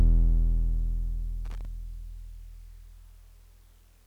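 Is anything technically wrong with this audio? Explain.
Yes. Loose connector crackle breaks into the music from 1.45 s to 1.65 s, a burst lasting about 0.2 s. A worn or dirty contact somewhere in the chain is momentarily shifting, so the connection keeps opening and closing in quick succession, chopping the signal into fragments, while any DC present on the line turns each make or break into a pop. The result is an uneven, scratchy crackle laid over the music.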